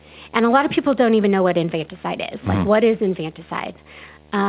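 From the start, a video or display buzz sits under the speech at about 30 dB below it: a steady 75 Hz hum with a fuzzy hash above it, from a monitor refreshing at 75 Hz coupling into the audio. Its 75 Hz fundamental, rather than 50 or 60 Hz, and its edgy harmonics set it apart from mains hum.

Also throughout, there is clock drift between sender and receiver. The sender's clock runs about 2% slow, so the receiver's jitter buffer keeps draining. There is a gentle, persistent unevenness that never settles.

Between 0.41 and 4.21 s, repeated timing corrections patch that shortfall. The receiver repeats short slices, adding around 70 ms in total and leaving the speech at about 98% speed. The edits are all stretches, unevenly spaced, and heard as faint hiccups and a slightly dragging tempo. Nothing above 4 kHz comes through the call path, which fits G.711 mu-law.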